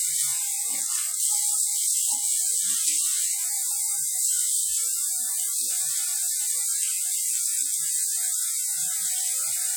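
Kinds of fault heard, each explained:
WMA compression: plainly audible washy, ringing smear with hiss that breathes with the sound and nothing above 18.9 kHz, likely from WMA encoding at a low bitrate, which fits 48 kbps.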